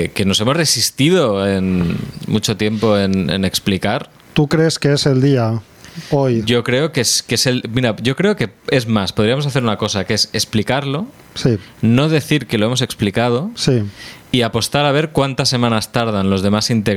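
Gain pumping throughout the speech: the gain ducks about 15 dB under loud syllables, likely excessive gain into a fast limiter. The waveform looks squashed, with loud and soft parts close in level.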